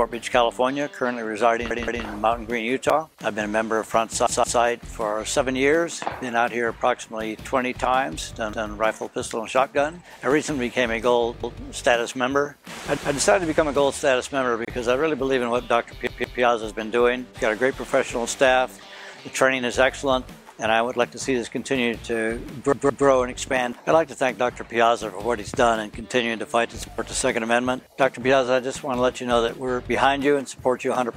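Six times, new audio failed to reach the playback device in time, and it played its last buffer again. Each buffer is about 171 ms long, which fits an 8192-sample buffer. These repeated buffers occur at 1.71 to 2.05 s, 4.27 to 4.61 s, 8.53 to 8.70 s, 11.44 to 11.61 s, 16.07 to 16.41 s and 22.73 to 23.07 s. The same piece of sound plays twice over at the third and fourth events and three times over at the others, with a hard join at every repeat. That is heard as a stutter, and almost nothing is lost, since the sound resumes where it left off.

At 14.65 s there is a gap at a join of encoded pieces. Two separately encoded segments were spliced without trimming the encoder's start-up silence and final-frame padding. That leaves a break of about 28 ms in otherwise continuous sound. Codec smearing softens its edges, and the sound then continues from where it stopped.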